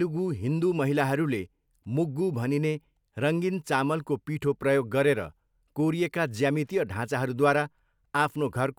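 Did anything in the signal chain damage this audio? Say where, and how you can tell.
No, nothing in the signal chain damaged this speech recording. No stage from capture through to playback leaves an audible mark on it.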